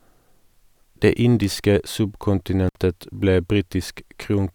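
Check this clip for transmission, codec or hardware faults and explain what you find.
An intermittent contact fault occurs at 2.68 s: a loose connection opens for about 60 ms, dropping the speech out with crackle at each edge.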